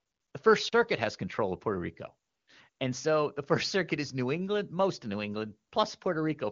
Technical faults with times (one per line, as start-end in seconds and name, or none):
0.00-0.33 AMR comfort noise
2.27-2.79 AMR comfort noise
5.69-5.71 AMR comfort noise